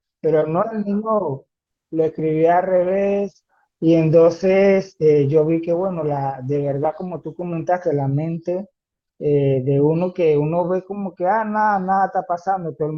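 At 1.67 s the speech suddenly picks up more codec artefacts, with no gap at all in the audio. That's an adaptive stream at a lower bitrate: the player switched to a cheaper version while the connection was struggling. The artefacts sound like a step from roughly 64 kbit/s Opus down to about 16 kbit/s. At 7.67 s the better quality returns, just as abruptly, six seconds later.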